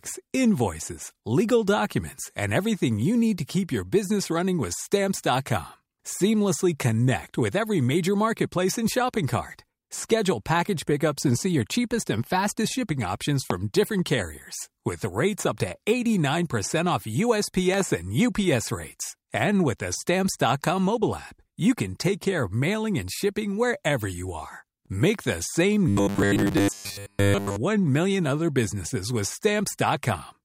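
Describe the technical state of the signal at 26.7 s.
At 26.7 s the speech has become a rigid, metallic buzz pitched at 100 Hz, loosely tracking the words, from 25.88 to 27.56 s just after "the same": robotic sound from repeated short buffers, likely caused by audio arriving too seldom, so that roughly two-thirds of the sound is a looped 10 ms chunk.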